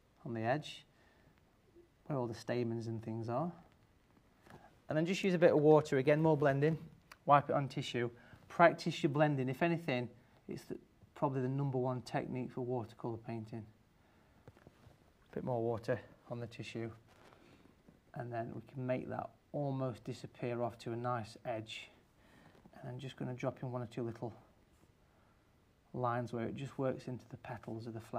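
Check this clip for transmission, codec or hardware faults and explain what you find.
No transmission, codec or hardware faults are audible anywhere in the clip.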